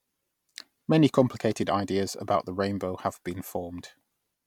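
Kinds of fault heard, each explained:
No technical fault can be heard in this speech clip. There are no dropouts, clicks or distortion anywhere in the recording.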